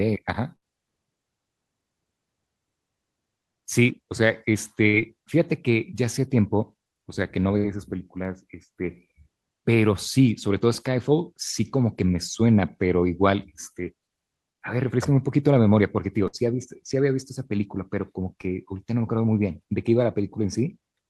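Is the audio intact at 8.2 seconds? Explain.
No. At 8.25 s there is a brief low thump, a click with weight behind it, while the speech carries on unchanged. This is a DC step: the waveform's zero line suddenly jumps to a new offset, as when a converter recalibrates or an offset input is switched in. The abrupt shift is what you hear as the thump. The offset then drains away gradually, as if through a high-pass filter near 5 Hz.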